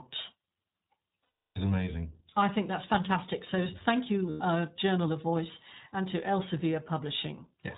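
Throughout, the speech is coded with the iLBC codec. Nothing above 4 kHz survives, and the voice sounds plainly rough and synthetic. This fits the 15.2 kbps, 20 ms mode.

From 1.26 to 1.59 s, lost iLBC frames leave a 320 ms gap before "amazing I think that's." The decoder repeats the last pitch cycle mixed with noise, so a buzzy vowel is held. A shorter 100 ms loss at 4.30 to 4.42 s sounds the same. Speech recovers at once.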